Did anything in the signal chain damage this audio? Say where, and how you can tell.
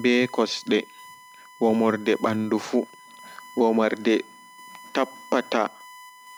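Yes. A steady, fixed-pitch whine at 1 kHz sits under the speech for the whole clip, roughly 25 dB below it. This is USB whine: the bus's 1 ms frame timing pulls current in bursts that leak into the analogue path through shared power or ground wiring.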